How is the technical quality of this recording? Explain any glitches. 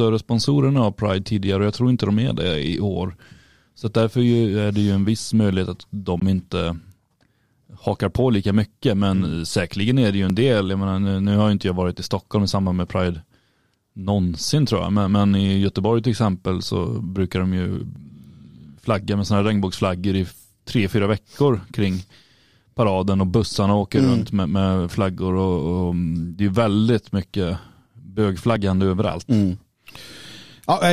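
The recording has four short glitches: one brief gap and three skips.

At 6.20 to 6.22 s, just after "en viss möjlighet att", the sound cuts to silence, with about 14.5 ms of audio lost, and then resumes further on. This is likely a Bluetooth dropout, consistent with a single audio packet arriving too late to play.

At 10.30 s, after "säkerligen är det ju", and again at 17.96 s and 28.56 s, there is a jump in the speech but no silence. About 20 ms is lost at the first and about 10 ms at the others. This fits a dropped buffer (overrun), where unread samples were overwritten and the two sides joined.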